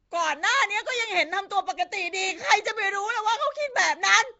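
From start to end, the speech carries Nellymoser compression, likely from the old Flash microphone codec. The audio is cut off above about 7.8 kHz, and weak bands are replaced by noise, giving a rough, hissy halo and a smeared, underwater character, with damage that is plainly audible. The consistency of that roughness fits a fixed rate around 32 kbps, and unlike MP3's swirling, warbling artefacts, the grain stays even and noisy throughout.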